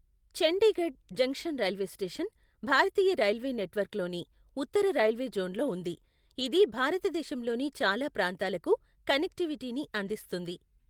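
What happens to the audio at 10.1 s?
Right after "భారతదేశంలోని చాలా ప్రాంతాలకు కనెక్టివిటీని", from 10.07 to 10.09 s, is a lost packet rebuilt from error correction: one 20 ms packet went missing, and the decoder played the low-bitrate copy carried in the next packet. The speech continues without a gap but turns briefly rougher and noisier. On a waveform there is no dropout, and a spectrogram shows a thin, smeared, grainier slice.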